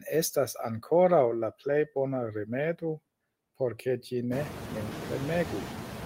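Noise suppressor artifacts run through the whole clip. The suppressor lowers bands it judges to be steady noise, frame by frame, but cuts only about 2 dB. So it barely holds back the room noise. That noise jumps about 23 dB around 4.5 s.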